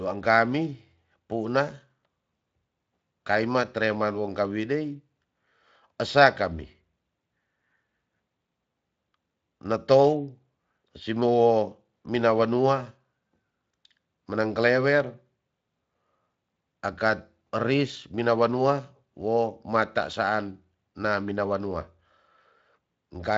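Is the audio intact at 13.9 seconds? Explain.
Yes, the audio is intact at 13.9 seconds, with no fault at that moment.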